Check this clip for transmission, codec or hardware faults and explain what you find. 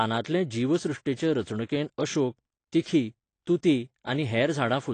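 One codec fault runs through the whole speech clip. Throughout, nothing survives above 9 kHz, and the speech sounds dull and smeared with a fizzy, warbling edge, likely AAC compression at a low rate that fits roughly 32 kbps.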